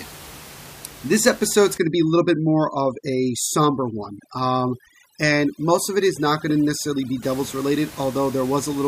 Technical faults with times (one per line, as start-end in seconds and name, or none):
1.78-7.22 overdone noise removal